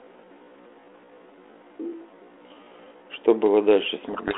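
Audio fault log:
0.00 to 3.06 s, time-stretched section: the opening is dragged out to about 0.56 of normal pace while the pitch stays put, so it drags, with a sudden change of pace at 3.06 s. That's likely a stretch-to-fit process keeping pitch by repeating short slices of the audio.
4.06 to 4.38 s, codec payload misread: right at the end the speech goes under a harsh, buzzy distortion and stays that way to the last moment. The G.726 code words are being read with their bits in the wrong order, so the decoder takes valid-looking data and rebuilds the wrong differences from it. Before this, the 32 kbit/s G.726 line just sounds like a narrow 300 Hz to 3.4 kHz phone band with light coding grit.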